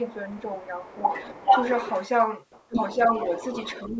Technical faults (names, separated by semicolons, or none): speech suppressed in double talk; other side's voice leaking through